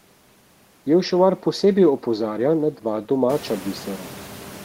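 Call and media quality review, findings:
No system faults found in the speech; room background noise rises by about 20 dB at around 3.5 s and stays about 18 dB below the speech, part of the recording environment.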